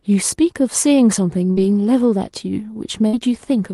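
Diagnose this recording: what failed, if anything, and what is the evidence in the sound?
Network burst of packet loss at 1.51–1.60 s and 3.07–3.16 s: the last sound is held and fades, then speech resumes 60 ms further on, rather than a silent dropout.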